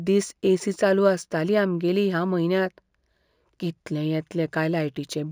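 A faint metallic shimmer rides on sibilants throughout the speech, with the top end dulled. This is imaging from linear upsampling: straight-line interpolation, which points to 16 kHz audio raised to 44.1 kHz, leaves mirrored spectrum copies between 8 and 16 kHz, about 30 dB down.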